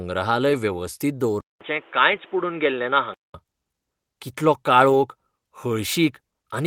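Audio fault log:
0.49–0.55 s, 2.11–2.17 s and 4.89–4.95 s: lost packet rebuilt from error correction. Each time, a short stretch of speech turns rough and grainy, but there is no gap. Each span fits two lost packets. The packet after the loss carried a cheap, low-bitrate copy of it, and the decoder played that copy. The copy lacks fine detail, so these moments sound noisier. The second one falls inside the dull stretch below.
1.41–3.34 s: input switched to a poorer device, likely. The sound drops out for about 200 ms, then returns dull and boxy. Nothing comes through above 3.8 kHz. A new background hiss sits about 30 dB under the speech. The loudness stays much the same. This fits a change to a narrower-band microphone or a headset call profile. Full brightness returns at 3.34 s.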